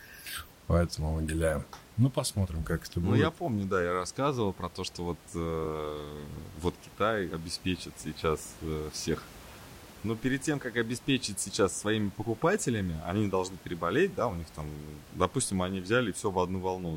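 No technical faults are audible.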